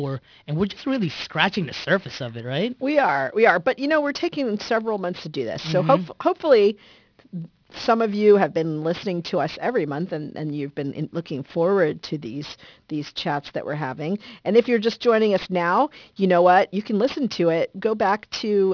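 Aliasing runs through the whole speech clip. The audio was downsampled, which fits a rate near 11 kHz, without an anti-alias filter, so content above about 5.5 kHz folds back as unrelated tones roughly 20 dB under the signal. Sibilants sound gritty and metallic, and the spectrum runs hard up to 5.5 kHz.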